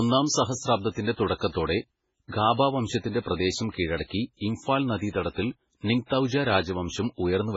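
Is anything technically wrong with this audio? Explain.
Yes. Throughout, the speech is dull and watery, with nothing above 7.6 kHz, likely from heavy MP3 compression at a very low bitrate that cuts treble and switches weak frequency components on and off.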